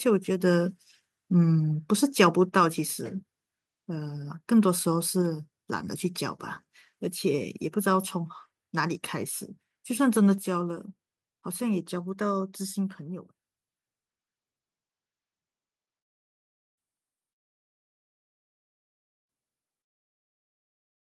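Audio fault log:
2.49 s, 5.22 s and 10.38 s, microphone volume stepped down: The speech and the background both drop in level at once, each time in a single step. The first two drops are about 3 dB and the third is about 5 dB. The level stays at each new setting with no recovery. This is likely the call software lowering the microphone's input volume after judging it too loud. That is why the whole sound, not just the voice, falls together.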